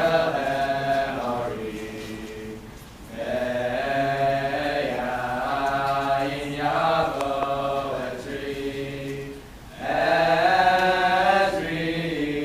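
The audio carries one loud pop, from 7.03 to 7.07 s. It is a single sharp burst lasting under 40 ms. It stands out at roughly 5 dB above the surrounding sound. The audio carries on beneath it without a break. The likely cause is a sudden voltage step or pulse entering the signal path. That could come from a plug, a switch, static discharge or a driver glitch. The circuitry downstream then shaped that jolt into the pop heard here.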